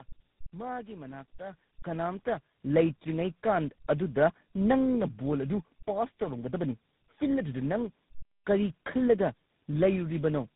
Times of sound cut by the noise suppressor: none

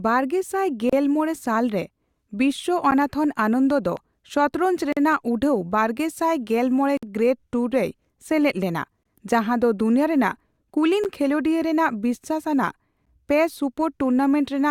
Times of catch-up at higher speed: none

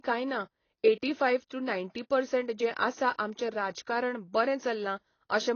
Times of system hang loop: none

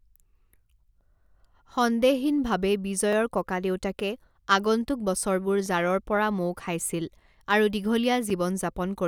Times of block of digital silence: 3.13, 5.66, 8.30

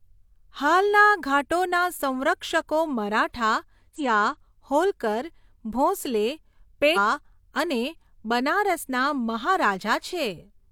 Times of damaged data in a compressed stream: 3.95-4.01, 6.92-6.98

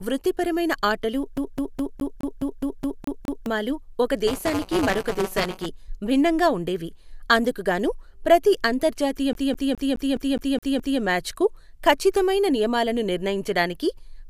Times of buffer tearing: 4.27-5.66

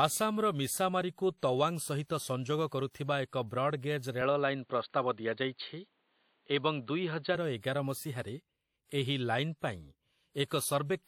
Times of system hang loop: none

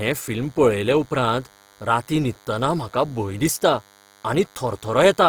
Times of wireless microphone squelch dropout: none

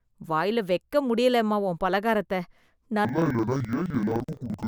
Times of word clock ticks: none

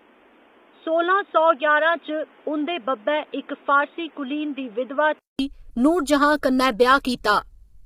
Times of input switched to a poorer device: 0.00-5.39

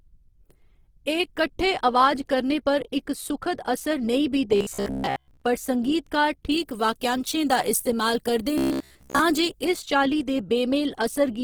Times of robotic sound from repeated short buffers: 4.56-5.41, 8.58-9.21

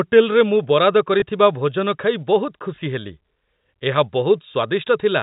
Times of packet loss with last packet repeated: 1.20-1.22, 2.76-2.78, 4.52-4.54

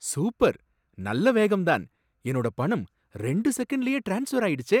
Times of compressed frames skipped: none

